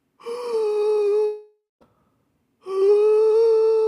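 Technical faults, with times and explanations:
1.25 to 1.83 s, long network dropout: the sound turns into a decaying buzzy continuation of its last moment, then about 0.2 s of near-silence, and resumes with roughly 0.56 s lost, likely from audio not arriving. A spectrogram shows smeared, fading bands before a blank gap.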